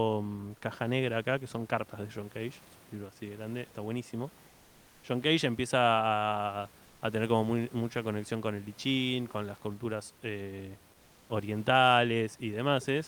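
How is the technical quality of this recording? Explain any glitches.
The speech has two short gaps where comfort noise replaces the background: 4.47–5.03 s, after "de grande está buenísimo", and 6.85–7.01 s, before "tener como mucha conexión". The real room noise drops out, and steady, featureless hiss about 2 dB quieter fills in, likely from Opus discontinuous transmission synthesising noise during detected silence.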